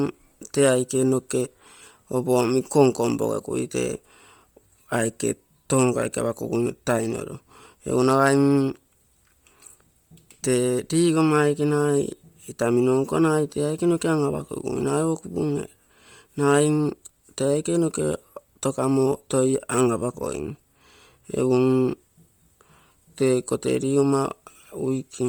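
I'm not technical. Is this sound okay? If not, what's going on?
No, not quite. All the way through, the speech has a breathy, grainy fizz on the upper end, with the crisp detail replaced by a noisy hiss. That's heavy Bluetooth LC3 compression, likely from a wireless headset squeezing the sound hard to save data.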